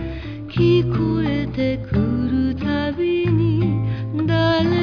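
No technical fault can be heard anywhere in the recording, and the signal holds steady from its first moment to its last.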